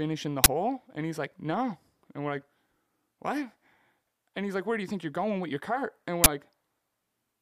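Uninitialised buffer at 0.44 to 0.46 s and again at 6.24 to 6.26 s: a 20 ms block played before being filled, so stale memory bursts out as a loud crack.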